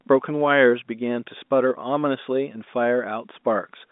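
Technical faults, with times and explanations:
No faults are audible anywhere in this telephone-band speech.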